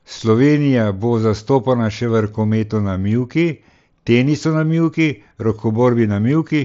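No technical faults heard.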